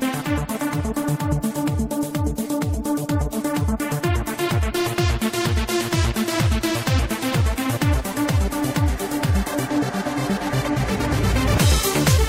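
At 4.98 s there is a single sharp click, a brief broadband tick across the spectrum. This is likely dropped samples: a fraction of a millisecond missing from the stream, so the waveform jumps abruptly to a later value without removing any audible sound.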